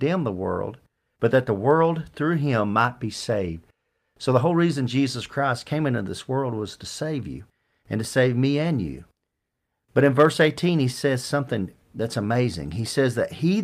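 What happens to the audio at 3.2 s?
Nothing goes wrong at 3.2 s; the speech there plays through intact, with no dropout, click or distortion.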